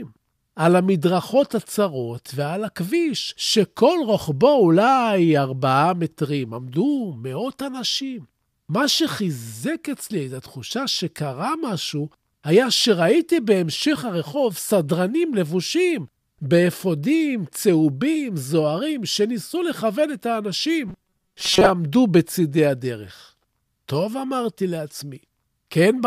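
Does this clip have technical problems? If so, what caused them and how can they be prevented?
Yes. From 20.87 to 21.70 s, the speech turns into a rigid metallic buzz at 188 Hz. This is robotic sound from repeated short buffers. It is likely caused by audio arriving too slowly, so roughly half the time is filled by repeating a buffer of about 5.3 ms. Larger buffers or a more stable connection would prevent it.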